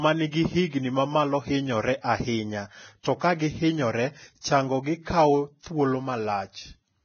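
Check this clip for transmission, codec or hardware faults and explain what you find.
Two codec faults are present: heavy lossy compression throughout, and two pre-echo events.

Throughout, a lowered cut-off and coarse treble quantisation, likely from Vorbis compression at a very low rate (around 18 kbps), remove everything above 6.5 kHz and make the speech hissy and grainy.

Pre-echo occurs at 3.01–3.05 s, after "mamalo hinyore ahinya" and before "to kagi hinyore chango", and again at 4.41–4.44 s, after "ahinya to kagi hinyore" and before "chango gi kawo thuol". Block quantisation noise spreads about 39 ms and 37 ms ahead of each attack as a brief hiss.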